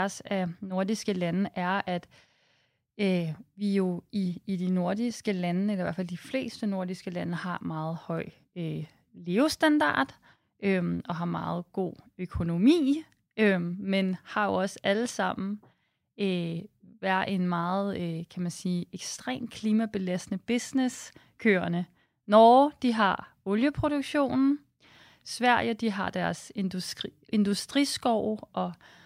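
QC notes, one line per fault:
Nothing to flag here, the speech comes through without a single problem worth noting.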